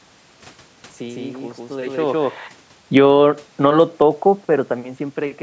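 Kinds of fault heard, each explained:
Automatic gain falling: The level control judged the input too loud and eased its gain down. From 2.81 to 3.92 s the speech sinks by about 4 dB. The room noise drops with it, so this drop is not the talker moving away.
Automatic gain rising: At 3.12 s, before the drop ends, the control reverses and raises its gain by about 5 dB until 4.39 s. Speech and room noise swell together over more than a second.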